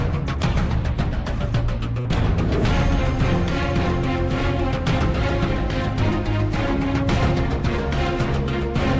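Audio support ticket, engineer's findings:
Burst of packet loss, 2.00 to 2.06 s. Consecutive packets lost or late past the jitter buffer. Concealment extends the preceding sound about 45 ms, fading it, then playback resumes about 40 ms further on. Audible as a brief smeared hold, then a skip. Call path present throughout: nothing above 8 kHz, consistent with G.722 at 64 kbps.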